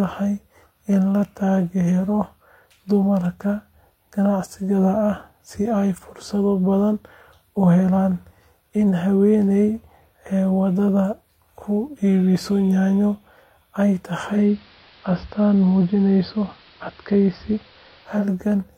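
Speech clip with a digital radio blending to analogue at 14.21 s: the receiver lost the digital stream and cross-faded over about a third of a second to the station's AM broadcast, staying there until 18.31 s. You can hear a level shift of about 2 dB and a hiss sitting roughly 30 dB under the speech before it blends back to digital.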